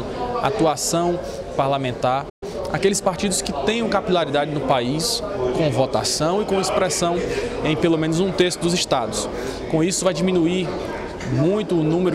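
At 2.29 s the sound cuts out mid-flow and stays silent until 2.43 s, a playback stall. The likely cause is the player running out of buffered data or its thread being blocked. On a waveform this is a flat line; a spectrogram shows a clean vertical blank band.

From 2.43 to 3.23 s the audio comes back hurried, running at about 1.15 times normal speed without any rise in pitch. This is time-compressed catch-up: the player trims its backlog by dropping small slices and cross-fading the joins. On a spectrogram the harmonics keep their height but events crowd closer in time.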